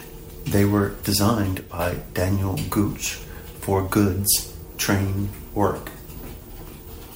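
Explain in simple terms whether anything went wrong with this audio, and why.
At 1.59 seconds the speech suddenly gets quieter for about a fifth of a second, then returns to normal at 1.79 seconds. The likely cause is one channel drops out: one side of the stereo signal briefly went missing.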